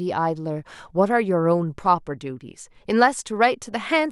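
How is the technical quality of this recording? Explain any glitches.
Nothing to flag here: the speech comes through without a single glitch, so there's nothing needing explanation.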